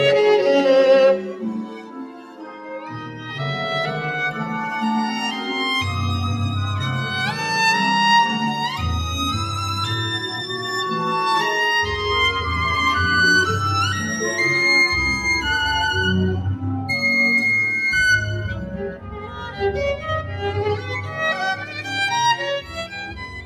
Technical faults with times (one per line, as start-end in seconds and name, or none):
0.00-23.46 noise suppressor applied to music or sounds
1.19-3.31 sound cut by the noise suppressor
18.59-19.60 sound cut by the noise suppressor
21.61-21.81 sound cut by the noise suppressor
22.61-22.77 sound cut by the noise suppressor
23.06-23.46 sound cut by the noise suppressor